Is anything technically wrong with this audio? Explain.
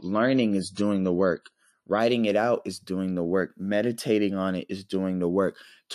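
Yes. The opening shows an adaptive stream starting at a low bitrate. From 0.0 to 2.0 s the speech is dull and smeared, with nothing above about 11.4 kHz and clear codec artefacts, which fits a 32 kbit/s MP3. Once the player has measured the connection, it switches to a better rendition. The quality then jumps sharply, with no gap, to something consistent with 128 kbit/s, just before "it out is doing".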